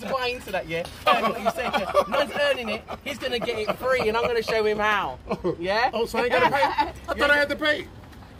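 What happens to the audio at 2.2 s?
At 2.18 s the audio jumps ahead: compressed frames are skipped, so around seven frames, roughly 150 ms, never get played. The jump fits frames of about 26 ms, and because neighbouring frames overlap, the join comes out as a short smeared blip, not a sharp click.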